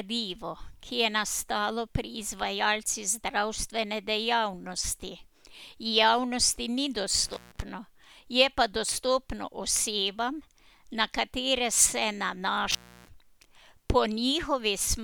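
At 7.26 s, right after "javnosti ni", the speech cuts out in an intermittent contact: a loose cable or plug breaks the signal path for about 0.15 s, with a crackle as it opens and again as it closes. It happens again from 12.71 to 13.09 s, open for about 0.30 s. Faint hiss continues through each gap, and together with the crackling edges this sets it apart from a digital dropout, which falls to clean silence.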